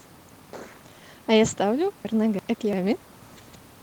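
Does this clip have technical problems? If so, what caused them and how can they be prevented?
Yes. Chunks out of order from 2.05 to 2.73 s: a 341 ms chunk plays one chunk late, so the sound jumbles with three hard joins. Unlike a dropout or a repeat, nothing is missing or duplicated. To prevent it, sequence-number each chunk and reorder them in a jitter buffer before playback or writing.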